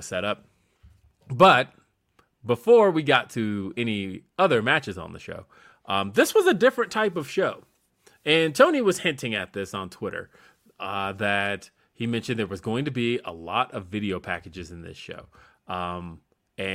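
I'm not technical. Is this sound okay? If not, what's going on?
Yes, this sound is okay, and nothing is going on with it.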